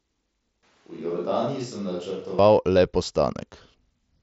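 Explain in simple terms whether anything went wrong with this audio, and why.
Switch to a distant microphone, from 0.63 to 2.39 s: the sound suddenly turns hollow and roomy, drops noticeably in level, loses low-end warmth and picks up more background room noise, then snaps back. The likely cause is the close microphone dropping out, leaving only a farther one.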